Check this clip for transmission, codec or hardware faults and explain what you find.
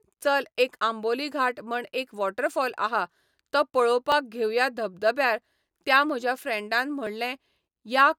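Two brief skips interrupt the speech. At 4.12 s and 7.07 s the audio makes a small forward jump, likely a dropped buffer (overrun), where a few milliseconds of unread samples were overwritten and the two sides joined directly.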